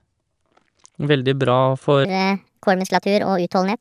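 From 2.05 s to the end, a wrong sample rate sets in. The speech plays 1.45 times too fast and 6.5 semitones high, which fits 22 kHz audio played back at 32 kHz without conversion. Pitch and tempo rise together, sounding squeaky and hurried.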